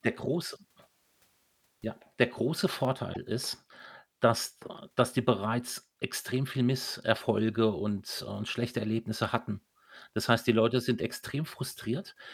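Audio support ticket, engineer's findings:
Dropped samples at 2.85 s: likely a brief buffer underrun or sample skip in the capture or playback path, losing a fraction of a millisecond of signal. The waveform jumps discontinuously, producing a single sharp click with no audible gap in the speech.

Damaged data in a compressed stream, 3.10 to 3.17 s: corrupted bytes in the encoded stream cause the decoder to misread frames, lose sync and hunt for the next valid header. Heard as a short glitch lasting about 70 ms, shortly after the click.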